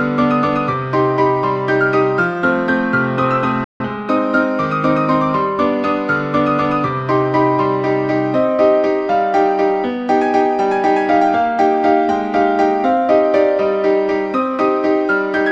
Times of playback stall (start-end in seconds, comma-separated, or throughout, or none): 3.64-3.80